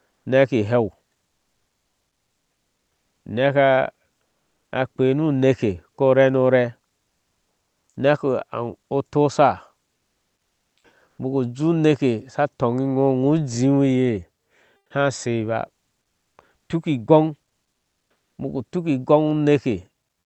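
Comfort noise in place of the background appears at 0.10–0.25 s, 1.28–3.25 s (after "neki ileu"), 4.24–4.72 s (before "akpei nu neke ko"), 7.08–7.96 s, 9.96–11.18 s, 14.76–14.90 s, 16.02–16.38 s and 17.70–18.38 s (before "ubuku tuki"). In each pause the real background gives way to steady, featureless hiss. This is likely Opus discontinuous transmission, with the receiver synthesising filler noise. The filler is about 2 dB louder in the first gap and about 4 to 9 dB quieter in the others apart from the 9.96–11.18 s gap.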